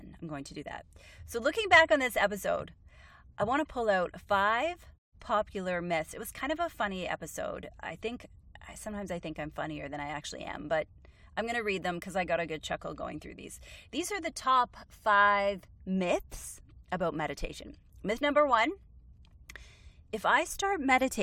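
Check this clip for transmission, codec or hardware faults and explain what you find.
Nothing here points to a transmission, codec or hardware problem; the speech comes through without any dropouts, glitches or distortion to flag.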